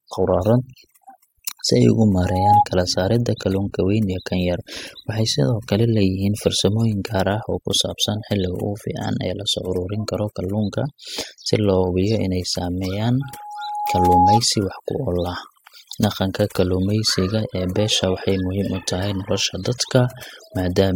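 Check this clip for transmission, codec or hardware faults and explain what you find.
Two faults are present: overdone noise removal across the whole speech clip, and a loudspeaker feedback squeal in the later part.

Overdone noise removal runs from start to finish. A noise reducer set far too hard mutes any frequency band sitting near its noise estimate, taking quiet speech detail with it. The background drops to near silence dotted with twinkling specks. Unlike a low-bitrate codec, the damage follows the noise floor rather than the loudness of the speech.

A loudspeaker feedback squeal appears from 13.21 to 14.40 s. The microphone hears the speaker it drives, and at 832 Hz the loop gain passes one, so that tone feeds on itself. It swells over roughly a second to about 10 dB above the speech. A steady interfering tone would arrive at full level instead of building.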